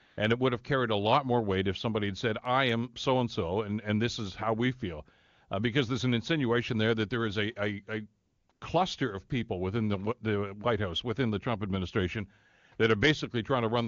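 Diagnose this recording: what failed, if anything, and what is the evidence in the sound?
AMR comfort noise at 0.05 to 0.17 s, 8.25 to 8.49 s and 8.51 to 8.61 s: in these gaps, lasting 120, 240 and 100 ms, the real background gives way to a smooth, steady hiss that switches in and out. The codec's silence detection stopped sending speech frames, and the receiver synthesised noise from a coarse level-and-spectrum description.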